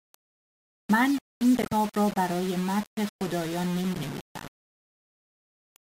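The speech in this clip was most likely reduced to a very coarse word length and rounded without dither, a low bit depth without dither that fits something like 4 bits. With no dither, the rounding error tracks the signal itself, sitting only about 20 dB below it. Throughout, the speech carries a grainy, buzzing distortion that shifts with each syllable, and the softer parts turn rough and sputtery instead of fading smoothly. Separately, compressed frames were corrupted at two points and decoded anyway (corrupt frame decoded), so the decoder put energy at the wrong frequencies. The first runs from 1.62 to 1.73 s, straight after "من این", and covers a few frames. It peaks at about -15 dBFS and is a short glitch before "ر ا برای مدح" resumes. The second, from 3.91 to 3.97 s just after "ا برای مدح خدایان", is briefer and quieter at about -20 dBFS.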